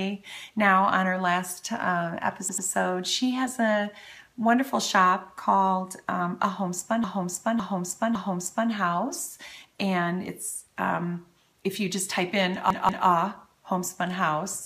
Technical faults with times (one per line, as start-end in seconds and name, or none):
2.49-2.67 repeated frames
7.04-8.71 repeated frames
12.70-13.07 repeated frames